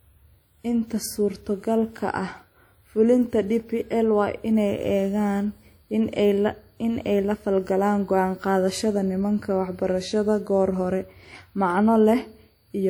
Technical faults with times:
0.00-12.89 WMA compression

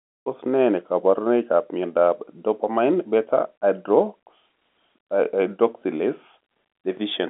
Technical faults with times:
none

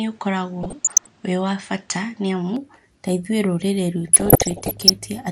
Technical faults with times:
0.00-5.31 MP2 compression
0.00-2.56 input switched to a poorer device
0.63-1.09 DAB burbling
4.08-4.90 DAB burbling

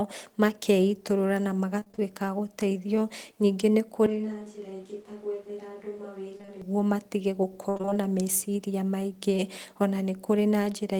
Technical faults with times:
1.79-1.99 repeated packet loss (robotic sound)
4.06-6.62 switch to a distant microphone
6.37-6.49 short concealed packet loss
7.69-7.97 repeated packet loss (robotic sound)

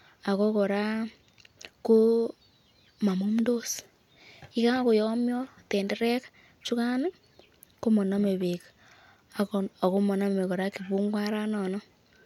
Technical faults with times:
none

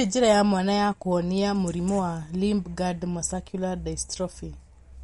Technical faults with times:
0.00-5.04 MP3 compression

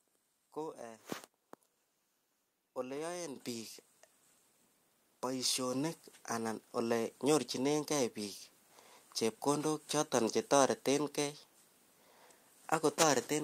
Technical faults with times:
3.36 microphone volume stepped up
5.73 microphone volume stepped up

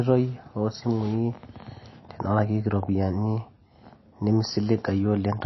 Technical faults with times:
0.00-5.45 MP3 compression

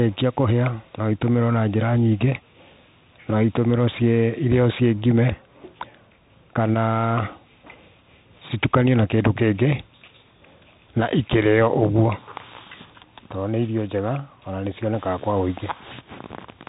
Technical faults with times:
0.00-16.69 Bluetooth CVSD headset codec

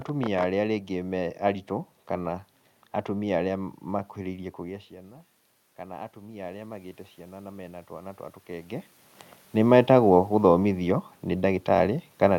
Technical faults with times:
4.19-8.97 automatic gain rising

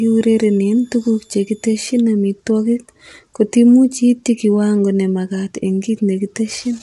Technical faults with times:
0.00-6.82 low-delay AAC compression
0.00-2.00 switching supply whistle

